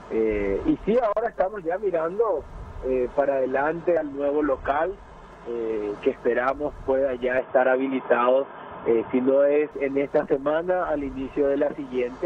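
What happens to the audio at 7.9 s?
From 7.38 to 9.71 s the sound turns dull and boxy, with nothing above 3.5 kHz and a level shift of about 5 dB. The input likely switched to a poorer device.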